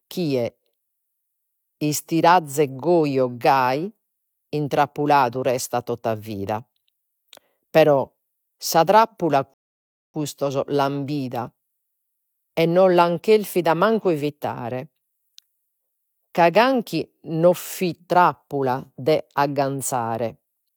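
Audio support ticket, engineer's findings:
Rebuffering stall in the speech, 9.54 to 10.14 s. Audio drops to dead silence right after "sa trappula", then picks up cleanly at "l'an bida" with nothing skipped. Player buffer ran dry and playback paused until more audio downloaded, so it's a delivery or buffering issue, not the content. Adds about 0.6 s to the runtime, and it'll happen again if throughput dips.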